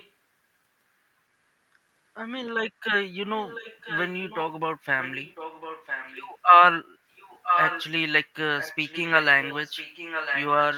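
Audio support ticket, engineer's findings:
Echo leak. A delayed copy of the speech returns about 1.0 s after the original, at 0.0–0.1 s, 3.38–4.38 s, 5.01–6.32 s, 7.16–7.85 s, 8.58–9.24 s and 9.41–10.78 s. Faint at the start. Around 15 dB below the speech mid-clip. Nearly as loud as the speech at 7.16 s. Likely the far end's loudspeaker reaching its mic, with the echo canceller not removing it, so the leftover is sent back.

Background gated by the echo canceller, 6.93–7.06 s. The room sound dips by about 7 dB for roughly 150 ms, then recovers. The far-end canceller is turning its mic down hard while its loudspeaker plays, which pulls the background down with it. It releases just before the loud echo at 7.16 s.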